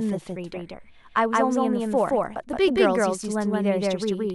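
From the very start and all the way through, the speech has a doubled audio track: a second full copy trails the first by roughly 150 ms, at about the same loudness. It sounds like a flat, slapback stutter on every syllable, with no decay or room colour to make it read as an echo. That points to the same signal likely reaching the mix twice, once through a slower path running a fixed step behind.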